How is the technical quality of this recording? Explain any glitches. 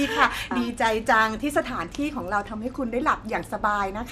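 The quality is compromised by plainly audible lossy compression throughout. The speech sounds dull, with a gurgling, granular texture. Nothing is present above 14.4 kHz. This is likely MP2 compression at a low rate, around 80 kbps. Upper sub-bands drop out and flicker, and the remaining bands are coarsely quantised.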